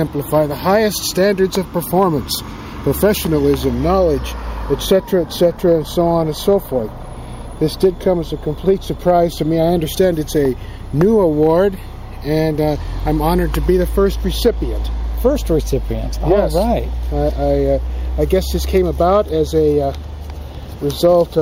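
Clock slip clicks run from 0.12 s to 21.39 s, a faint tick roughly every tenth of a second that is clearest under louder sound. Two unsynchronised clocks, likely differing by around 200 ppm, force a single-sample drop or repeat each time.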